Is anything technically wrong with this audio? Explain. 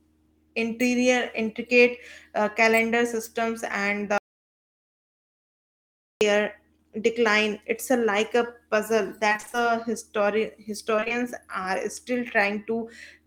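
Yes, there are two kinds of fault.

Audio dropout to silence, 4.18 to 6.21 s. The input likely disconnected or was muted while recording continued, so about 2 s of speech is replaced by silence with no room tone, cutting out and resuming abruptly.

Repeated packet loss (robotic sound), 9.29 to 9.63 s and 10.96 to 11.23 s. Short losses of about 20 ms each recur rapidly. Each is patched by extending the preceding sound, covering nearly half of each stretch, so the speech turns choppy, with fragments missing.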